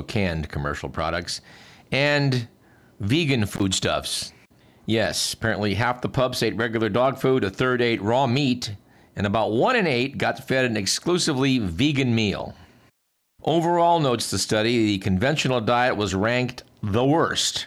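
Speech, with one intermittent contact fault at 3.54 s. A loose cable or plug opens for about 42 ms and the sound drops out. Crackle marks both edges of the gap. The whole event runs from 3.54 to 3.62 s.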